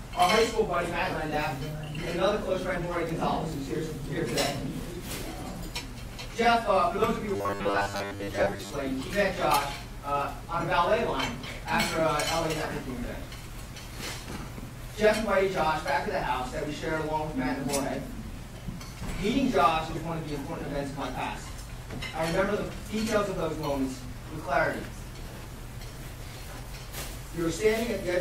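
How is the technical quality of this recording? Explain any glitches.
One real glitch. From about 7.36 to 8.71 s the sound turns into a rigid, metallic 100 Hz buzz, the robotic sound from repeated short buffers. Audio was likely arriving too seldom, so most of that stretch is a roughly 10 ms chunk replayed while real audio gets skipped.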